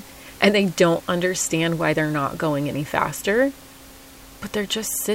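Nothing stood out on listening to the speech apart from a low room noise sitting about 23 dB beneath it.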